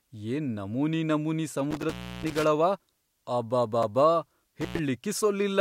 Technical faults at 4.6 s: intermittent contact

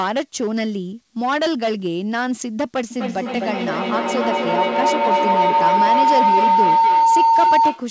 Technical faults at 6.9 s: hard clipping; feedback howl

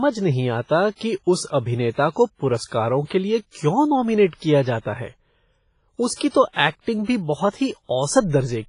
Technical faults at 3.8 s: WMA compression

